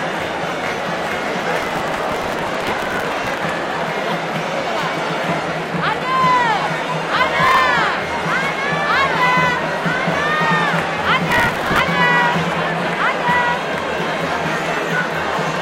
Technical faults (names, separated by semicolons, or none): processor overload crackle